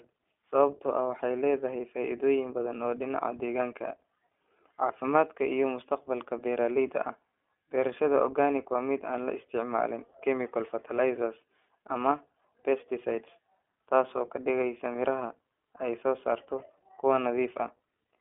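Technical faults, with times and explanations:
Throughout, iLBC codec: the speech is confined to a telephone band of roughly 300 Hz to 3.4 kHz, with nothing above 3.7 kHz, and carries a plainly audible rough, synthetic grain. Each 20 ms frame is coded on its own rather than predicted from the previous one, which fits the 15.2 kbps mode. Unlike a simple band-limit, the tone is also coarsened.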